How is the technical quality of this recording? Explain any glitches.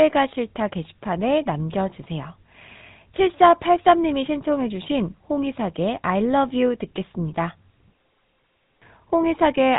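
The technical quality is limited by one fault that runs through the whole recording. The speech has passed through the GSM full-rate codec. Nothing comes through above about 3.8 kHz, so the sound is dull and boxy. The codec models the vocal tract as a filter. It drives that filter with a sparse train of regular pulses instead of the real excitation. The damage is plainly audible as a buzzy, gravelly roughness. This fits the first GSM codec at 13 kbps.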